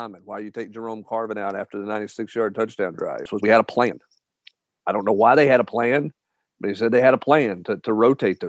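From 0.26 s to 3.07 s you get automatic gain rising: the gain control decided the input was too quiet and kept nudging it up, about 11 dB in all, so the voice and the background swell together over those few seconds.

Right after, around 3.25 to 3.27 s, there's a skip ahead. Roughly a second of audio got dropped while later audio was already queued, so playback just jumps forward with no gap, and the two sides are butted straight together.

Then from 3.35 s to 5.87 s the jitter buffer speed-up kicks in. The buffer was sitting on too much delay, so the receiver kept trimming tiny pitch-period slices, about half a second in total. Speech runs at about 118% with the pitch unchanged and comes across rushed.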